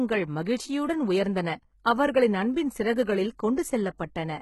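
HE-AAC compression runs throughout the speech: the treble is likely rebuilt by spectral band replication from copied lower bands, so s sounds turn gritty and metallic, nothing sounds above 11.8 kHz, and the heavy damage fits a very low bitrate around 16 kbps.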